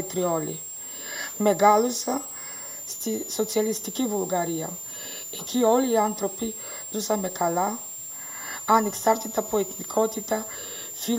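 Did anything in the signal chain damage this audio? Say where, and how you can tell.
Yes. The damage comes in at the analogue stage, from the power feeding it. A switching supply whistle, a high tone near 7 kHz, runs through the whole clip, only about 10 dB below the sound. Its pitch wanders between roughly 7.08 and 7.65 kHz as the supply's load shifts. That drifting pitch separates it from mains hum, which sits at fixed low harmonics, and from a steady pilot or clock tone.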